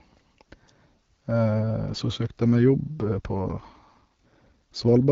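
From 3.00 s to the end of the clip there is an AMR rate drop. The speech, carried over AMR-WB wideband coding with light codec damage, turns rougher and more synthetic. The texture fits the codec stepping down from about 12.65 to 8.85 kbit/s, spending fewer bits on the voice itself. On a spectrogram the band still reaches about 7 kHz and there is no gap, but harmonics blur and fill with noise. The waveform stays continuous.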